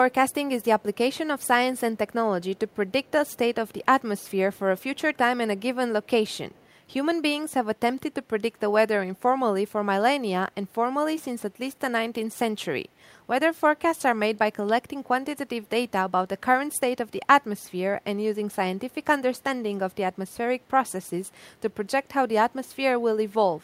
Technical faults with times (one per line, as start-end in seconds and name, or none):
0.12-0.96 echo leak
1.40-1.47 echo leak
2.43-3.37 echo leak
4.19-5.17 echo leak
6.04-6.67 echo leak